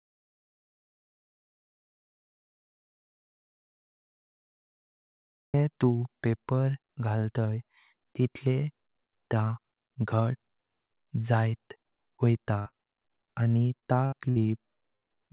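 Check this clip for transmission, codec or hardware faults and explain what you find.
Three kinds of fault are audible in this speech clip: a long dropout at the start, then clusters of packet loss near the end, heard over a narrowband call path with nothing above 4 kHz, which fits G.711 mu-law at 64 kbps.

Audio dropout to silence runs from the very start, 0.0 s, to 5.54 s, ending just before "तू पेपर". The input was likely lost, through a disconnected device or mute, while silence kept being written, so this stretch is silent with no room tone.

Bursts of packet loss occur at 12.59, 14.06, 14.30 and 14.96 s, each about 90 ms long. Roughly 60 ms of audio went missing each time, and the receiver extended the preceding sound while fading it, giving a held buzz or decaying hiss before speech resumes further on.

Short concealed packet loss appears at 12.68 to 12.74 s, directly after the first burst, and at 13.79 to 13.85 s. 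About 30 ms failed to arrive each time, and the gap was bridged by continuing the last pitch or noise, heard as a brief smear or wobble.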